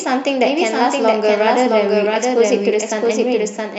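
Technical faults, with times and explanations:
Throughout, doubled audio track: the speech is shadowed by a second full-band copy trailing about 0.7 seconds behind and roughly 5 dB quieter, dry with no decay or room colour. The likely cause is the signal being captured twice, once through a slower path.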